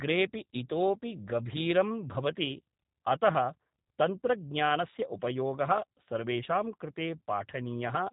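From start to finish the speech sounds boxed-in and faintly buzzy, with a slightly rough, synthetic edge that is plainly audible, and there is nothing above about 3.8 kHz. This is G.729 codec damage. The codec keeps only a vocal tract filter, a pitch estimate and a handful of pulses for each short frame and resynthesises the voice from them, so the fine detail and the high band are gone. The sound fits the 8 kbit/s rate of G.729A.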